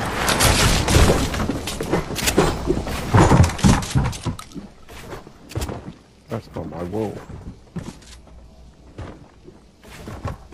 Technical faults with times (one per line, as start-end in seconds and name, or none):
none